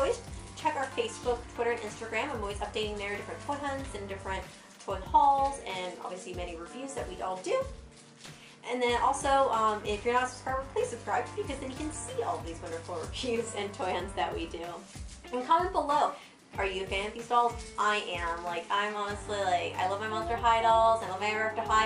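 Nothing here trips the ear as a technical fault, so there's no problem to describe in this bit of audio.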